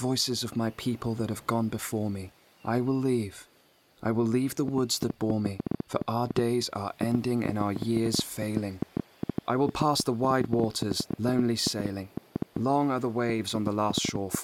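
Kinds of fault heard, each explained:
Train of clicks: From about 4.7 s to the end, roughly seventy similar pops tick through the sound at an uneven pace, around 6.7 per second and peaking near 15 dB above it, likely from nearby equipment interference or a faulty connection or power supply.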